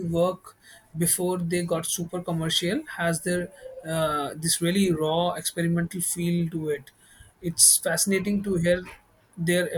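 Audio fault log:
Nothing stood out on listening to this speech recording.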